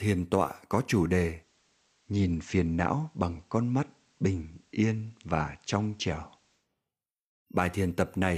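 Speech, with a digital radio blending to analogue episode from 1.29 s to 6.69 s, starting just after "tọa có chủ". The receiver lost its digital stream and cross-faded over about 176 ms to the station's FM feed, then back. During that stretch a faint hiss sits roughly 40 dB below the voice, while the level stays the same.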